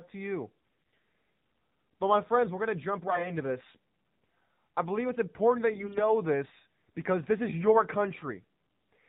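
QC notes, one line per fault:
throughout  AMR narrowband mobile codec: nothing passes above 4 kHz, and the speech has a buzzy, synthetic edge that fits a low mode near 7.4 kbps. A spectrogram shows a hard ceiling at 4 kHz.
0.58–0.98 s, 3.06–3.32 s, 5.72–6.12 s  AMR bit errors: after "to you", after "we're going to jump", and between "I believe it's important" and "this because this is", the speech turns hoarse, scratchy and gargly. Corrupted bits put the pulses that drive the voice model in the wrong places, while pitch and level roughly hold. On a spectrogram the harmonics smear into noise, and the waveform envelope stays about the same.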